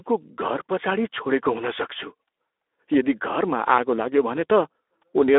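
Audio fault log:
Throughout, Speex codec: the speech comes through hoarse and grainy. Speex is a CELP coder, and at a low-to-middle setting like this, which fits something around 11 kbps, it has too few bits to rebuild the excitation cleanly. It sits inside a phone-style band of roughly 300 Hz to 3.6 kHz, and nothing at all comes through above 3.8 kHz, so it's dull as well as rough.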